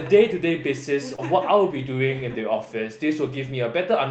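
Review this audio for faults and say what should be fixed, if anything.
Short concealed packet loss at 1.15 to 1.20 s: about 20 ms of speech arrived too late for the decoder, so the receiver synthesized roughly 27 ms of continuation before blending back into the real signal. This leaves a brief smear in the voice. A deeper jitter buffer or forward error correction on the link would prevent it.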